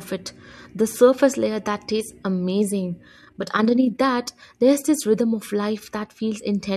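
A speech recording with one fault. From 3.2 to 4.03 seconds the level pumps up and down quickly, giving a rough, robotic flutter. This is overlap-add ripple. The audio was split into windowed frames and rejoined with an overlap that does not add up to a steady gain. Each frame therefore brings a dip and a swell in level. The swing is about 6 dB, at a rate of around 30 per second.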